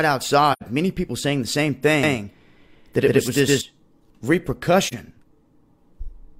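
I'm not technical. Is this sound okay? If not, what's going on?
No. There are two kinds of problem.

The first is AAC frame loss with muting. The sound drops out briefly, twice. The first gap is from 0.52 to 0.63 s and lasts about 85 ms, which fits two lost chunks of compressed audio. The second is at 4.87 to 4.94 s and lasts about 43 ms, which fits one lost chunk. The player had nothing to play there, so it went silent. The sound fades out and back in softly.

The second is a doubled audio track, from 2.03 to 3.61 s. The same sound plays twice, with the second copy about a tenth of a second behind and roughly as loud as the first. It sounds like a stutter or a flat echo, but without any sense of a room. It starts and stops suddenly. The likely cause is the sound being picked up twice, once through a slower route.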